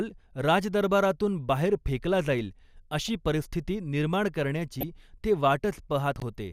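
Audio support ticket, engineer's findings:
DAB burbling, 3.06–3.12 s and 4.74–4.83 s: brief burbling blips over speech. Probable component: DAB receiver/MP2 decoder. Residual bit errors, roughly 0.15 % and 0.1 %, pass error correction and corrupt scale factors, so single sub-bands jump in level. Burst lengths fit four to five frames. Unlike a dropout, audio never goes silent.

Chunks out of order, 6.16–6.22 s: jumbled moment. Probable component: capture/buffer write path. One 20 ms chunk lands two chunks late, giving three hard joins. Unlike a skip or repeat, nothing is missing or duplicated. The order is wrong.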